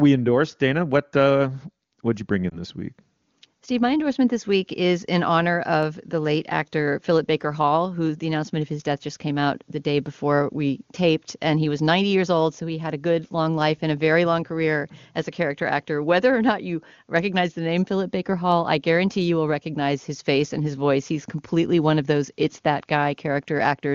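A speech recording with one brief lost AMR speech frame, at 2.49 to 2.60 s, just after "what'd you bring". The sound briefly dips or warbles. A radio error corrupted the frame, so the decoder could not use it. It reused the last good pitch and vocal tract settings at lower gain. The gap is short, which fits a single lost 20 ms frame. The speech then returns weak or rough for a moment. The AMR wideband (HD Voice) codec at 23.85 kbit/s sounds clear.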